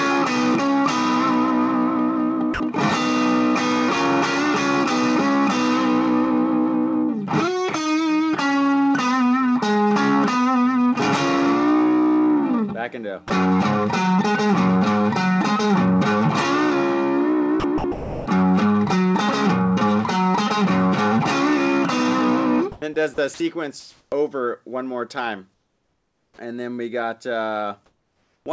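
Sound dropped by the voice detector at 2.54 to 2.60 s and 22.72 to 22.82 s: brief holes filled with steady noise, likely because the sender's detector mistook quiet sound for background and stopped sending. Sound chopped by the voice detector at 17.60 to 18.26 s and 23.14 to 23.40 s: repeated gaps replaced by synthetic noise, likely from the detector switching transmission on and off more than once within each stretch. Comfort noise in place of the background at 23.80 to 24.12 s, 25.54 to 26.38 s and 27.86 to 28.46 s: the real background, roughly 50 dB below the loudest sound, gives way to smoother generated noise, about 6 dB louder in the first pause, about 10 dB quieter in the second and about 2 dB quieter in the third, likely because discontinuous transmission stopped sending and the receiver filled the gaps. Onset clipped by the voice detector at 26.35 to 26.38 s: the sound returning after the second pause starts abruptly, having lost 30 ms of its beginning, likely because the detector was slow to notice it. 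The audio also carries nothing above 8 kHz, which fits a G.722 wideband call codec.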